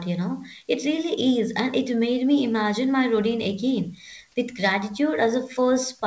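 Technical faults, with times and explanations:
No technical faults heard.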